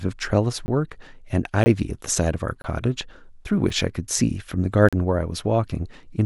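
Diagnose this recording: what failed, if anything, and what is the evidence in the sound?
Blocks of digital silence at 0.66–0.68, 1.64–1.66, 2.62–2.64, 3.69 and 4.89–4.93 s cut the speech out abruptly, with no fade, which points to buffer underruns.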